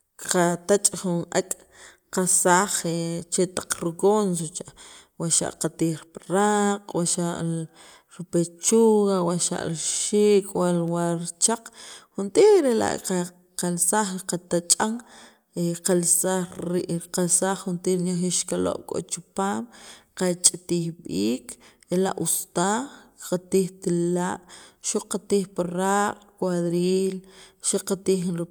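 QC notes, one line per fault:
No faults found; nothing to flag on this speech clip.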